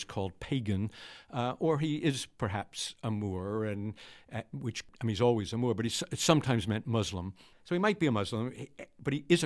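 Nothing stood out on listening to this speech recording.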